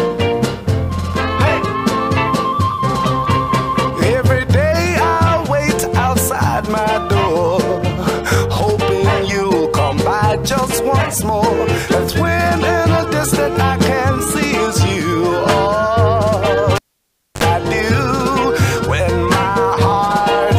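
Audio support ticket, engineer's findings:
Cable pulled and plugged in, 16.76–17.44 s. Pop at disconnect, about 630 ms near silence, then about 59 ms of 50 Hz mains buzz as the plug tip touches before full contact, second pop on reseat. Probable component: live signal cable/jack. Waveform: spike, flat gap, short dense hum band, spike. Spectrogram: vertical broadband lines at both pops, dark gap, brief horizontal 50 Hz line with harmonics.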